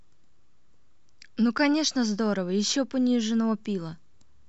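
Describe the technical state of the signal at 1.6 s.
A very brief hard-edged dropout to silence interrupts the speech at 1.58 s: a gap between stream segments, where mismatched timestamps left about 5 ms unfilled.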